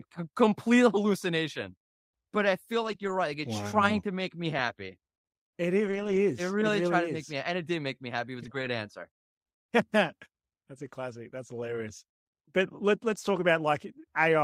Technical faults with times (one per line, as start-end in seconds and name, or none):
2.83-3.09 lost packet rebuilt from error correction
5.87-6.17 lost packet rebuilt from error correction
8.37-8.67 lost packet rebuilt from error correction
13.35-13.41 lost packet rebuilt from error correction